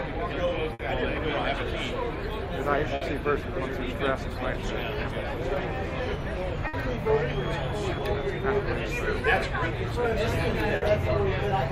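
Burst of packet loss occurs at 0.73–0.82, 2.95–3.04, 6.67–6.76 and 10.76–10.85 s. Each time, a run of packets was lost or arrived too late to play, so the receiver stretched and faded the last sound for about 60 ms, and the audio resumes with 60 ms skipped.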